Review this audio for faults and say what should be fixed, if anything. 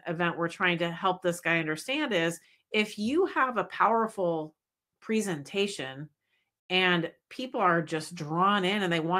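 Nothing needs fixing in this speech recording. No faults can be heard at any point.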